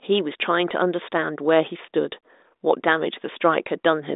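A speech recording with nothing technically wrong with it, heard through a telephone-band G.726 path that confines it to roughly 250 Hz to 3.7 kHz.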